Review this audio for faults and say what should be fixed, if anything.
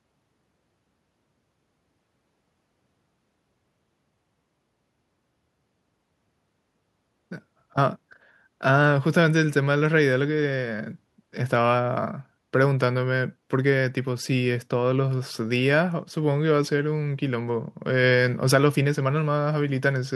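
Nothing here needs fixing; no faults were found.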